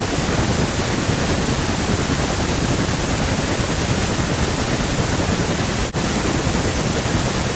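From the start to 1.0 s, 1.5 to 3.61 s, and 4.35 s to the end, the speech keeps ducking by up to around 40 dB, most likely speech suppressed in double talk.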